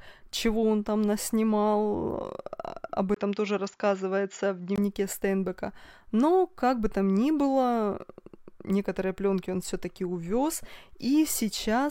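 Speech, with a 20 ms gap at 3.14 s, after which the sound turns duller, with nothing above 7.2 kHz and a new noise floor roughly 50 dB down, until 4.78 s; likely an input switched to a poorer device.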